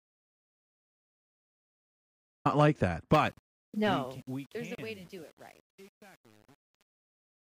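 The clip opens already in an audio dropout to silence. From 0.00 to 2.45 s there is silence, with no room tone at all. The input was likely lost, through a disconnected device or a failed link, while recording went on. Whatever was said in that gap is gone.

From about 3 s the speech fades out to the end at 7.42 s. From 3.20 s this fade carries truncation distortion. The level stage keeps too few bits and adds no dither, which fits an 8-bit stage. From 3.65 s onward it is worst: the quiet tail turns gritty.

At 4.75 s there is a digital broadcast dropout. The sound cuts to silence for 32 ms, then returns. That fits a single frame failing to arrive intact, with the receiver muting until good data resumed. What was sent in that moment is lost.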